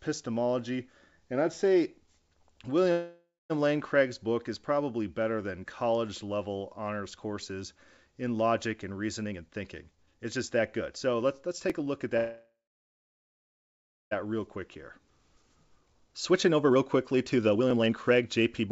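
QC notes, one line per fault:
2.92–3.52 s and 12.17–14.13 s, call audio freeze: the sound stalls and the last fragment is stretched into a fading buzz, then silence for about 0.21 s and 1.58 s respectively. This is likely due to held-up packets emptying the jitter buffer. Playback resumes where it stopped, with nothing lost.
5.69 s, 11.70 s, 17.71 s, overlapping chunks: a click at every 6 s join, the first between "is probably better than" and "level honors courses in". Each new chunk starts 7 ms early, so that slice plays twice.
9.25–12.08 s and 14.25 s to end, jitter buffer speed-up: after "courses in logic and", speech runs at 119% speed, then at 124% after the second freeze, with unchanged pitch. Roughly half a second is trimmed in the first run. The receiver cut short pitch-period pieces to drain the excess buffered delay, so delivery sounds hurried.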